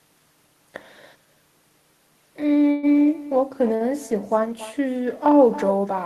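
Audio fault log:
Throughout: echo with no canceller. Each phrase of speech returns roughly a third of a second later as a fainter, thinner copy, about 17 dB below the original. The far end is playing the call through a loudspeaker and its microphone feeds that sound straight back with nothing subtracting it. On a spectrogram every syllable's energy pattern reappears as a dimmer, high-passed duplicate shifted right by that delay, and the waveform shows small trailing bursts after each phrase.
2.71 to 2.86 s: burst of packet loss. For about 114 ms the receiver had no fresh audio and stretched out the last sound it had, letting it fade, so the speech turns into a short held sound that dies away. About 120 ms of speech never arrives and the talk resumes further on with that stretch missing. A spectrogram shows flat, unchanging horizontal bands that weaken before an abrupt jump to new content, and the waveform shows a repeating, decaying pattern.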